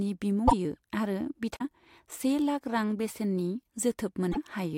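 Broken MP3 bit reservoir at 0.47 to 0.53 s, 1.55 to 1.61 s and 4.31 to 4.37 s: the speech skips ahead, then breaks up for 64 ms, spanning under three 24 ms frames. This is likely from frames that were cut, leaving the next frames to borrow reservoir bytes from the wrong data.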